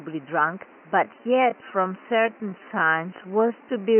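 A time-stretched section runs from 1.0 s to the end of the clip: the speech abruptly slows to about 0.70 times its original pace while its pitch stays put. This is likely software lengthening the audio to fit a target duration by repeating short slices rather than resampling, so syllables drag, heard over room noise sitting about 29 dB below the speech.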